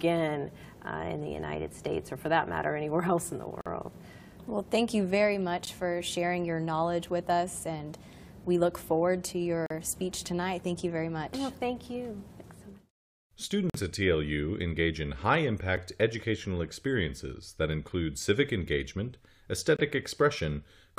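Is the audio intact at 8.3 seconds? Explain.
Yes, at 8.3 seconds the audio plays through cleanly, with no dropout, click, distortion or other fault at that moment.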